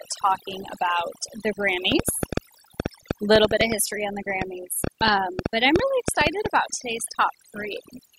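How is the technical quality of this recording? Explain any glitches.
The recording has two clear technical problems.

Overdone noise removal runs through the whole clip. The noise reduction was set too aggressively. Frequency bands near the noise floor are pushed far down or shut off, and the quieter parts of the speech are removed along with them. The background drops and breaks up into twinkling specks.

A train of clicks runs from 1.92 s to 6.47 s. It begins after "talking about the" and stops before "about today's". The clicks arrive at about 5.7 per second, at an uneven pace, around thirty in all. Each has much the same shape and peaks roughly 20 dB above the speech. They tick and pop over the voice and through the pauses. The likely cause is interference from nearby equipment or a faulty connection or power supply.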